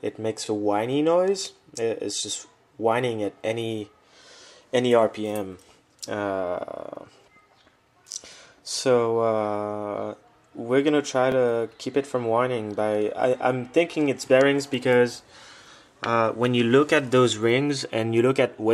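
At 8.12 s and 11.32 s, a repeated buffer: a 20 ms chunk replays two times, then once more, causing a brief stutter; the waveform shows identical repeating segments with hard joins.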